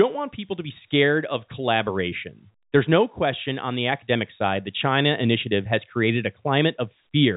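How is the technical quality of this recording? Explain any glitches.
No glitches or faults audible.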